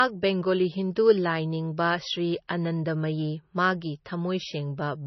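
Throughout the speech, nothing sounds above 5.9 kHz and coding smear remains, likely low-bitrate MP3 saved at a high bitrate, not a clean low-pass filter.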